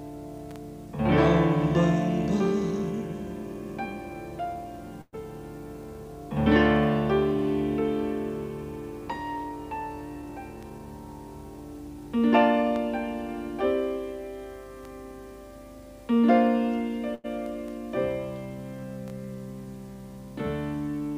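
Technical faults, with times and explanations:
5.01–5.15 s, call audio freeze: the last sound is carried on as a fading buzz for 114 ms, with about 20 ms of silence, likely because the jitter buffer ran empty. The spectrogram shows a smeared band, then a short blank gap.
10.15–10.86 s, jitter buffer speed-up: about 70 ms of short pitch-period pieces is cut to reach 111% speed, so the audio sounds hurried at unchanged pitch. Harmonic lines keep their height while events bunch closer.
17.15–17.26 s, short stall from a late packet: the sound is stretched for 94 ms until the packet arrives, then continues with nothing lost. The waveform shows a repeated, held segment.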